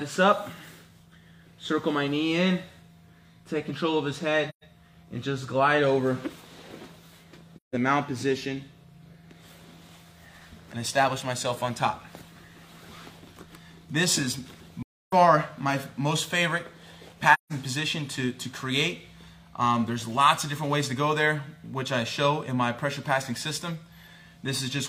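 AAC frame loss with muting occurs at 4.49 to 4.64 s, 7.56 to 7.75 s, 14.82 to 15.13 s and 17.34 to 17.52 s. The lost frames decode as zeroed spectrum, and the overlapping windows fade the sound out and back in, leaving soft-edged holes of 128 to 299 ms.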